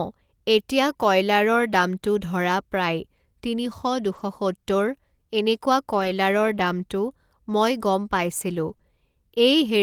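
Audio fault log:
2.23–2.25 s, 4.15–4.21 s, 5.99–6.09 s and 8.69 s, lost packet rebuilt from error correction: Each dropout was covered by a low-bitrate backup copy carried in the following packet. The speech runs on with no gap. Those stretches sound rougher and grainier, lasting about 20 ms, 40 ms, 60 ms and 20 ms. That fits one, two, three and one 20 ms frames. The copy holds less detail than the original, so the decoder fills in what it lacks.
8.73–8.81 s, short concealed packet loss: Right after the rebuilt frame at 8.69 s, two back-to-back 20 ms holes arrived with no backup. The receiver extended the last sound to bridge about 40 ms. It carried on the pitch where the speech was voiced and used shaped noise where it was not. Then it blended back into the real signal. This is heard as a brief smear or wobble, and a short consonant there can drop out.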